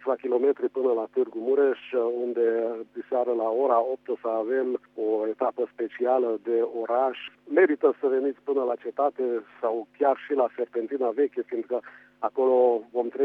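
No technical faults are audible.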